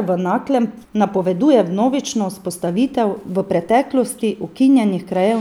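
No technical faults are audible anywhere in the recording.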